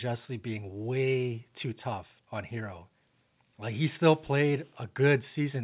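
Nothing goes wrong anywhere in this bit of speech, which comes through a WebRTC call path with its sound stopping at 4 kHz, which fits a G.711 A-law call codec running at 64 kbps.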